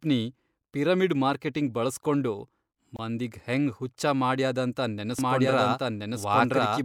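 At 2.96 s to 2.99 s the speech drops out for about 24 ms, just before "ಮಂದಿಗ್ ಹೆಂಗ್", then resumes where it stopped. This is a gap at a join of encoded pieces: separately encoded segments were spliced without trimming encoder delay and end padding, leaving a short silence with its edges smeared by the codec.

From 5.19 s to the end, a doubled audio track appears: a full-band copy of the speech, about as loud as the original, runs roughly a second behind, dry and without room colour, starting abruptly. The likely cause is a second, slower capture path or an edit holding two copies out of step.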